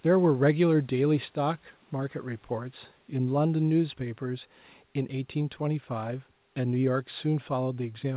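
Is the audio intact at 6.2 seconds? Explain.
Yes, at 6.2 seconds the speech is intact, with no dropout, glitch or other fault at that moment.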